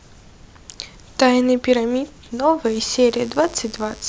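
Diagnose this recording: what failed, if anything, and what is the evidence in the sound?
Analogue wiring: from 2.64 s onward a raspy 50 Hz mains buzz sits well under the speech. Its spiky kilohertz harmonics, unlike smooth hum, point to switching interference.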